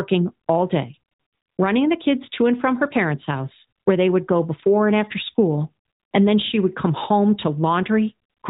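No technical faults are audible.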